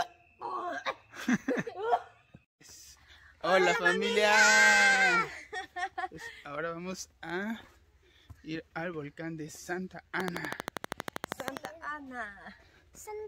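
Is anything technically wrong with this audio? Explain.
Yes. From 10.20 to 11.66 s there is a train of clicks, likely from electrical interference or a faulty connection or power supply, injecting the same sharp pulse into the signal again and again. The pulses arrive at a steady 12.4 per second, about twenty in all, each standing roughly 15 dB above the surrounding sound. The result is an even, rapid ticking laid over the audio for about a second and a half.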